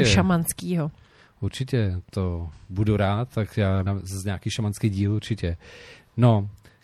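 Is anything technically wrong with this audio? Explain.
Yes. Throughout the speech, lossy encoding likely from MP3 compression at a low bitrate, around 64 kbps, starves weak frequency lines, leaving a plainly audible watery, swirly texture and smeared consonants.

At 3.86 s, compressed frames skipped: roughly two frames, consistent with a 26.1 ms frame length, never reach the output, so the speech jumps ahead about 50 ms with a brief smeared blip.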